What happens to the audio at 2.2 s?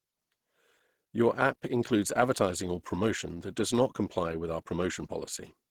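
At 2.2 s the speech carries the same damage as the rest of the clip. It sounds muffled and hoarse, with grainy, rough texture. This is likely Opus compression at a low rate, fitting about 16 kbps, running in its hybrid speech mode.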